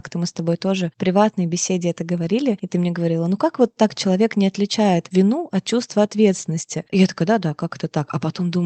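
No technical faults can be heard in the speech, which carries the expected band-limited character of a normal call path, with its upper frequencies ending at about 8 kHz.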